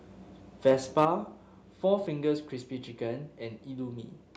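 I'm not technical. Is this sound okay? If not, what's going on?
No. There are two problems, both early in the recording.

Microphone overload shows up at 0.67 to 0.71 s and again at 0.98 to 1.05 s. The loudest moments sound harsh and crackly, likely because the microphone input was set too high, so the tops of those peaks got sliced off.

Microphone volume stepped down happens at 1.05 s, right after the second harsh peak. Everything suddenly gets quieter in one step, likely because the call software noticed the overload and turned the microphone input down on its own.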